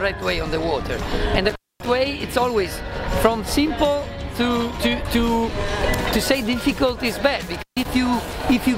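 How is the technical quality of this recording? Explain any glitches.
The recording has two glitches from an intermittent contact. At 1.49 to 1.87 s and 7.54 to 7.85 s, a loose cable or plug briefly opens. The sound drops out for about 246 ms and 144 ms, with crackle at the edges.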